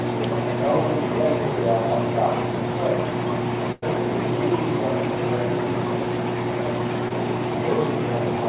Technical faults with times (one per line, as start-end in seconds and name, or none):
3.72-3.84 burst of packet loss
7.08-7.12 short concealed packet loss